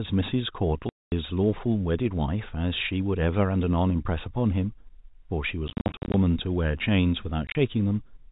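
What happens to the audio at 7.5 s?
Between 7.47 and 7.55 s the speech breaks up from packet loss filled with silence. About 60 ms of audio is missing, scattered across those 80 ms. The longest single hole lasts 30 ms. The receiver had nothing to play for the lost packets, so it inserted silence. The gaps are short and spaced in a way that fits 10 ms packets. Each hole starts and stops abruptly, so the speech stutters.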